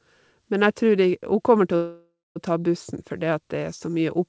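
At 1.76 s the speech stalls in a call audio freeze lasting until 2.38 s, just before "å ta bussen". The last sound is stretched into a fading buzz that decays into about 0.2 s of near-silence. The speech then resumes exactly where it stopped, with nothing lost but everything after arriving about 0.6 s late. That pattern points to packets held up in transit, which likely left the jitter buffer empty. Throughout, nothing is heard above 8 kHz, which fits a wideband call codec such as G.722.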